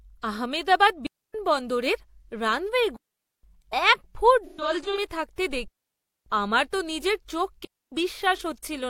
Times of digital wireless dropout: 1.06-1.34, 2.96-3.43, 5.68-6.26, 7.65-7.92

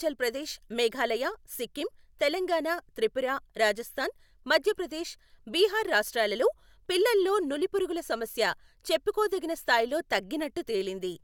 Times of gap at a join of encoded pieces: none

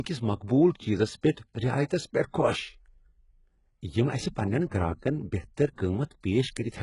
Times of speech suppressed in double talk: none

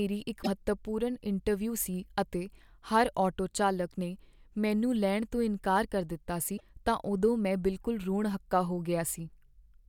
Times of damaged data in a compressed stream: 0.40-0.47, 6.54-6.61

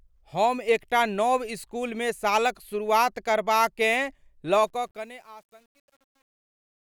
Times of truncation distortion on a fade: 4.59-6.81

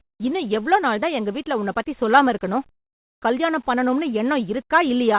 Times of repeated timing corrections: none

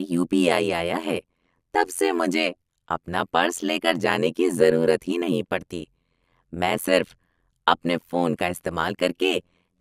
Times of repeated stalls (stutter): none

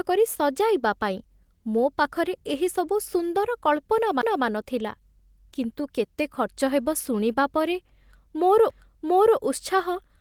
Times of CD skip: 4.21, 8.70

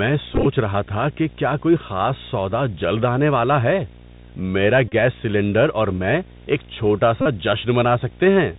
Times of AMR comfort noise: none

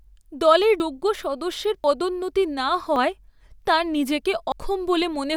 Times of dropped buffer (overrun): 0.80, 1.84, 2.96, 4.52

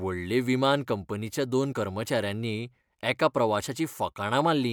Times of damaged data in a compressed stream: 1.69-1.74

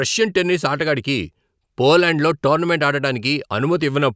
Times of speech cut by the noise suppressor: none

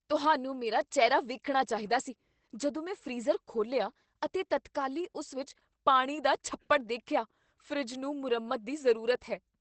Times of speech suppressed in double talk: none

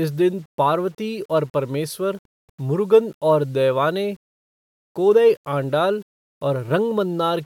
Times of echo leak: none

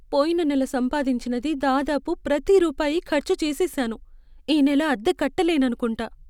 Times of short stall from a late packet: none

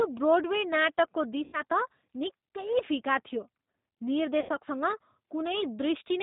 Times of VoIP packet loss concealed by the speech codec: 1.44-1.62, 4.40-4.49

